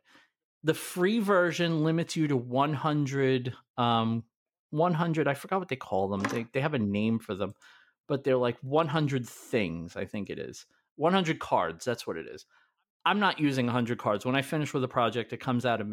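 No technical faults can be heard anywhere in this speech recording. Nothing in the audio points to a problem in how it was captured, processed or delivered.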